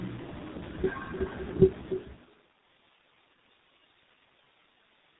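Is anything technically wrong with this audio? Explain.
Yes, two faults run through the whole speech clip.

Every phrase is trailed by a quieter, thinner copy about 12 dB down, roughly a third of a second later: echo with no canceller, where the far loudspeaker leaks into its microphone and returns unremoved.

The speech also sounds rough, muffled and warbly, with nothing above 3.9 kHz: tandem speech coding. It was re-encoded across successive codecs, which fits a chain ending in low-rate G.723.1, each coder compounding the last one's damage.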